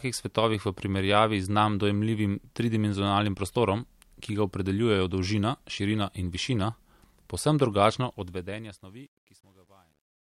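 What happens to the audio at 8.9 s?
At 8.9 s the speech is in the worst stretch of truncation distortion on a fade, which runs from 7.98 s to the end at 10.38 s and is harshest from 8.7 s to 10.4 s. As the fade-out that begins around 8 s drops the level, the gain stage rounds each sample to a coarse grid, likely a 10-bit word length, with no dither. The waveform collapses into square steps, so the tail sounds gritty. Unlike a clean fade, or bit reduction heard throughout the clip, the grit worsens only as the level falls.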